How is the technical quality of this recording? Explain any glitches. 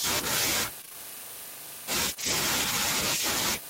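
The recording has three network-related glitches in quick succession, all in the first two-thirds of the speech.

From 0.81 to 0.96 s, repeated packet loss gives a robotic, choppy sound. Four holes of up to 19 ms were patched by extending earlier sound, seen as smeared, repetitive spectrogram bands.

From 2.14 to 2.18 s, a short concealed packet loss fills 20 ms by continuing the previous sound. It is heard as a brief smear or wobble.

From 2.18 to 2.32 s, lost packets are rebuilt from error correction. The 80 ms rebuilt fits four 20 ms packets decoded from low-bitrate backup copies. It sounds rougher and noisier.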